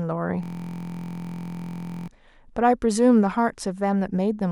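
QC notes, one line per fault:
0.43–2.08 s, system hang loop: the speech stops moving and becomes a steady, rough buzz at about 43 Hz, a mechanical drone with no progression, for about 1.6 s. A 23.22 ms slice of audio repeats exactly, roughly seventy times, which fits a 1024-sample buffer. The system or driver stalled while the sound hardware kept replaying the same ring buffer. The slice is so short that its repetition rate becomes the buzz's pitch.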